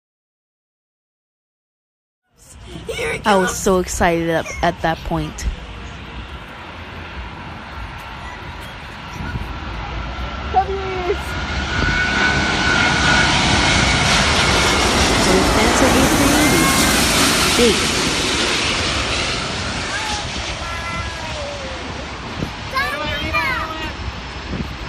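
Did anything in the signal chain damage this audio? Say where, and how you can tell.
No, nothing in the signal chain stood out on listening, and the gentle fade-in from about 2.0 s, ending at about 2.97 s, sounds like a deliberate edit rather than damage.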